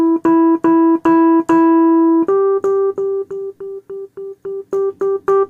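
No technical faults can be heard in this audio.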